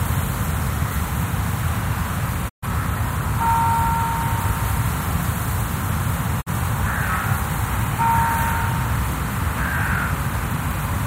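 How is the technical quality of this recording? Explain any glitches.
The recording has two brief digital broadcast dropouts; the gaps are clean and short. At 2.48 to 2.66 s and 6.40 to 6.51 s, the receiver muted on bad frames, fading out in 20 ms. The silence lasts about 128 ms and then 43 ms, which fits three lost 42.7 ms frames and then one. That stretch of audio is gone.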